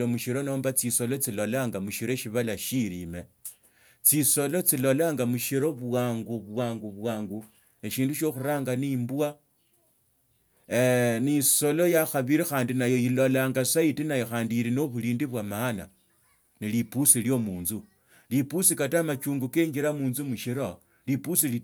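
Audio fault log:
No faults were found: the speech signal stays intact for the whole recording.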